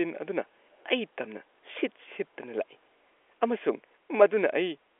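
At 0.79 s the far end's echo canceller likely let part of what its loudspeaker fed back into its microphone slip through, so an echo leak reaches this side until 0.86 s. A delayed copy of the speech, trailing the original by about 217 ms, surfaces as a brief, very faint scrap roughly 40 dB below the talker, easy to miss against the narrow 300 Hz to 3.5 kHz band of the G.711 telephone line.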